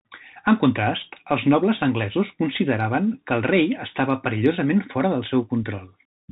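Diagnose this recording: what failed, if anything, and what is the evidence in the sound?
The failure is at the codec stage: the whole clip has gone through the Bluetooth CVSD headset codec, and the damage is plainly audible from start to finish. The speech is cut off above 4 kHz, so it sounds boxed-in and phone-like. A grainy hiss sits under it, and the s sounds come out scratchy. CVSD sends just one up-or-down bit per sample, which fits a 64 kbps link, and its adaptive step can't keep pace with loud, sharp bits.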